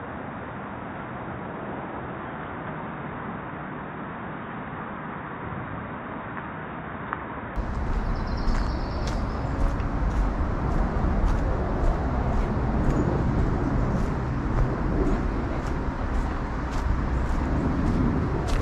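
From the start until 7.56 s the sound is dull and boxy, a little quieter, with a faint new hiss sitting well beneath it; the likely cause is the input switched to a poorer device, such as a second microphone or a headset's call profile. On a spectrogram that stretch shows nothing above 3.8 kHz, with a flat ceiling that lifts abruptly at 7.56 s. The waveform steps up slightly in level there, with no silent gap at the change.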